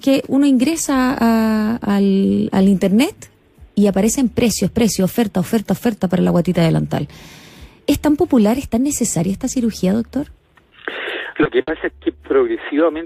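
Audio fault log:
11.43–11.47 s, short concealed packet loss: about 20 ms of audio arrived too late to decode, so the receiver carried the preceding sound forward and blended back into the real signal. It is heard as a brief smear or wobble, too short to fade, unlike the burst that follows.
11.61–11.69 s, burst of packet loss: about 60 ms went missing in a run, and the receiver extended the last sound while turning it down across the gap. It is heard as a held buzz or fading hiss, and the sound then resumes further on with that stretch gone.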